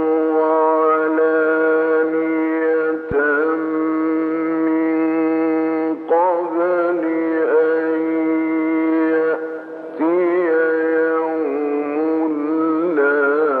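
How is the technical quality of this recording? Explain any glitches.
There is one clear glitch: a loud pop from 3.11 to 3.14 s. It is a single sharp, brief pop that stands a few decibels above the surrounding audio, while the sound carries on underneath without a break. The likely cause is a sudden electrical step or spike entering the signal path, such as a plug being moved, a switch, static discharge or a driver hiccup. The downstream circuitry turns that jump into a short, percussive burst.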